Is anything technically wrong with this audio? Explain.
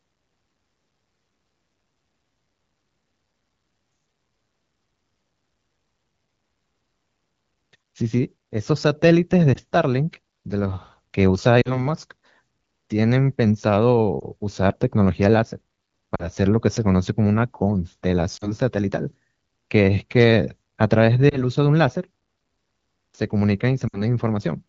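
Yes. Lost AMR speech frames: radio errors corrupted frames, so the wideband decoder reused earlier pitch and vocal-tract settings at falling gain. This causes brief dips or warbles at 9.54, 11.61–11.86, 14.20, 16.15–16.28, 18.37–18.53, 21.29–21.45 and 23.87–24.01 s. The final, longest gap fits about three lost 20 ms frames.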